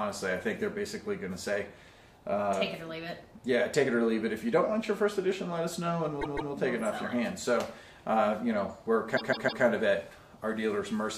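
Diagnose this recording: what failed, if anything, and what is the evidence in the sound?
Repeated frames at the codec or storage stage: a block of about 157 ms plays twice more at 6.21–6.52 s and three more times at 9.16–9.63 s. Each repeat is an identical stutter, which fits a six-frame run being resent. Unlike an underrun's gaps, nothing is lost and the audio runs longer.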